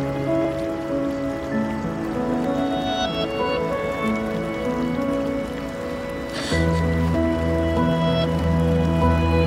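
From 0.45 s to 8.44 s there are periodic USB or driver dropouts, about five of them, every 2.0 s. Something stalls the audio path, and roughly half a millisecond gets skipped each time, so you hear small regular ticks wherever there's sound.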